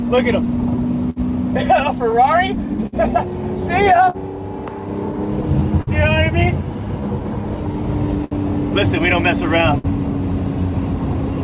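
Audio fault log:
Throughout, clock drift between sender and receiver: the sending end's clock runs slow, roughly 5 percent behind, so the jitter buffer keeps draining. The receiver has to keep stretching the audio to cover the shortfall, which gives small, unevenly spaced timing hiccups.
0.16 to 11.32 s, repeated timing corrections: the receiver keeps repeating short slivers to stay in step, playing at about 99 percent speed and adding roughly a tenth of a second overall. All of them go the same way, though they are unevenly spaced.
0.45 to 5.9 s, scattered short gaps: about ten late or lost packets, each patched by carrying the last bit of sound forward. That covers roughly 300 ms, with none longer than about 70 ms. You hear brief smears and ticks against the 4 kHz-limited G.711 sound.
8.25 to 11.17 s, scattered short gaps: a second cluster, about three holes this time, again filled by extending the preceding audio. 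It totals roughly 150 ms, with the longest around 70 ms, and comes across as quick smudges or hiccups.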